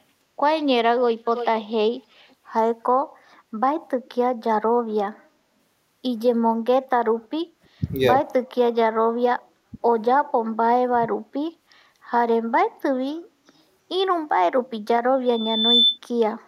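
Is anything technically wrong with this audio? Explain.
Yes, there are a few echo-canceller problems and a feedback squeal in this speech clip.

Echo leak at 1.35–1.65 s and 2.3–2.35 s: a delayed copy of the speech trails the original by 336 ms. The first is about 10 dB down; the second is barely there. The likely cause is a far-end speakerphone whose echo canceller let some of its loudspeaker pickup back down the line.

Background gated by the echo canceller at 7.15–7.5 s and 9.39–9.43 s: the room sound ducks by about 19 dB in the first, for roughly a fifth of a second in total, and about 11 dB in the second. The canceller clamped the mic hard while its speaker played, then released.

Speech suppressed in double talk at 7.78–7.82 s, 9.71–9.78 s and 10.92–11.03 s: the voice briefly dips, by around 20 dB, then 10 dB, then 20 dB again. This is likely the canceller mistaking overlapping talk for echo and turning everything down.

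Loudspeaker feedback squeal at 15.25–15.98 s: a 3.5 kHz tone swells over about half a second to roughly 5 dB above the program. The mic is hearing its own loudspeaker, and at that frequency the loop gain tipped past unity, so it fed on itself.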